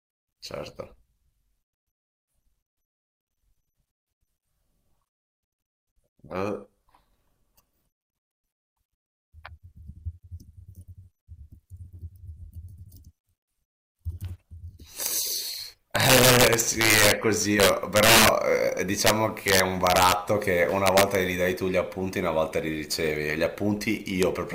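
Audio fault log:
15.06 s, 15.96–17.12 s, 17.60–18.29 s, 19.07–19.10 s, 19.48–20.12 s, 20.86–21.15 s, 24.23 s: integer overflow. Loud speech peaks, up to about 8 dB over full scale, wrap to the opposite sign instead of clipping, giving violent cracks. On the waveform, peaks jump rail to rail; the spectrogram shows full-band vertical streaks.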